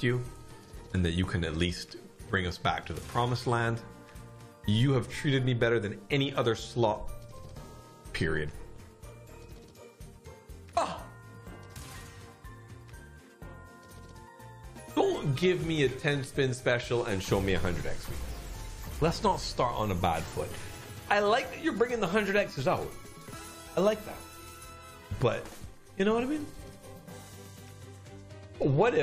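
Nothing in the signal points to a technical fault; the audio holds steady throughout, with no dropouts, glitches or level problems to report.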